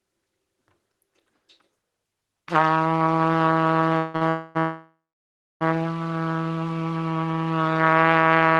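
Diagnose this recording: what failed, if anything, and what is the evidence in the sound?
The trouble sits at the network and jitter buffer stage of the call, around 4 to 5.6 s in this everyday-sound recording. You hear a call audio freeze three times: 3.97 to 4.16 s, 4.29 to 4.57 s, and a long one from 4.59 to 5.63 s. In each, the last sound is held on as a fading buzz, and the long one decays into about 640 ms of silence. Nothing is cut out afterwards; the sound just resumes late. That points to packets likely stuck in transit while the buffer ran dry, with the receiver padding the wait.

Squeezed between the first two freezes there's a short stall from a late packet, 4.16 to 4.23 s. It's a quick 50 ms stretch of the preceding sound with a slight buzzy dip, and then playback picks up exactly where it left off. One packet missed its slot, the jitter buffer emptied briefly, and the receiver drew out the last bit of audio until the packet showed up. 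Nothing's lost, but the clip gets pushed a bit later. The Opus call coding underneath sounds as expected.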